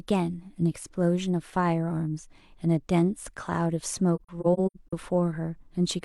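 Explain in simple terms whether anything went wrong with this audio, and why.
Between 4.15 and 4.93 seconds, the speech drops out in short gaps. This is AAC frame loss with muting. Small chunks of the coded audio never reached the decoder, so it filled them with silence. About 0.3 seconds went missing in total, scattered across that stretch. The longest single gap is roughly a tenth of a second. Each gap fades out and back in smoothly, so you hear soft holes.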